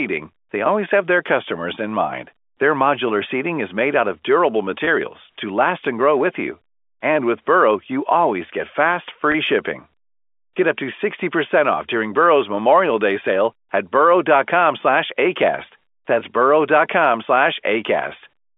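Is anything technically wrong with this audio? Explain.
Yes. This speech has three brief packet losses with pitch repetition, from 4.85 to 4.87 s, between "made out of durable" and "to last and grow", from 9.32 to 9.34 s, just after "you always get fast", and at 16.2 s. The first two drop about 20 ms each, which fits two 10 ms packets, and the last drops 10 ms. The receiver fills each gap by repeating the last pitch period, so each one sounds like a tiny held, buzzy blip. All of this sits on a G.711 A-law line limited to roughly 250 Hz to 3.5 kHz.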